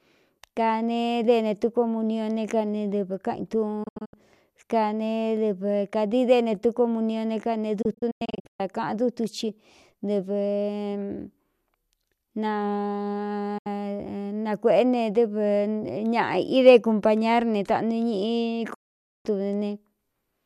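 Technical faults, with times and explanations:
3.83–4.14 s: digital broadcast dropout. The receiver muted in several short holes totalling 192 ms over 288 ms, longest 72 ms. Brief 8 ms fades mark each mute, consistent with 24 ms frames failing and being silenced.
7.82–8.60 s: digital broadcast dropout. 408 ms is missing, scattered across 768 ms, with gaps up to 120 ms.
13.58–13.67 s: digital broadcast dropout. There is a single 72 ms hole.
18.74–19.26 s: digital broadcast dropout. There is one continuous 504 ms silence.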